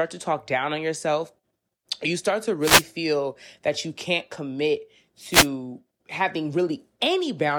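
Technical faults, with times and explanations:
2.61–2.84 s and 5.30–5.48 s, wireless microphone noise hit: a brief swish of static lasting about 0.2 s is heard after "you start to" and again after "that you can't commit", as the radio link fades through reflection cancellation and receiver noise rises.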